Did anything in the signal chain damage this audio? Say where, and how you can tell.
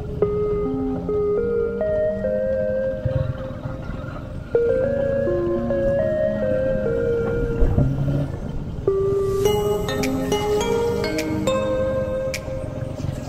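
No, nothing in the chain audibly damaged it.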